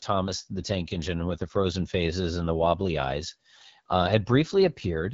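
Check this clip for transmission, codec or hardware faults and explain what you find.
There's one fault, and it runs the whole way through the speech: AMR wideband (HD Voice) codec damage, plainly audible. The sound sits at a low rate, consistent with about 8.85 kbit/s, so the pulse-driven vocal tract model coding everything up to 6.4 kHz leaves the speech rough and raspy. Above that it's just shaped noise, with nothing past 7.5 kHz.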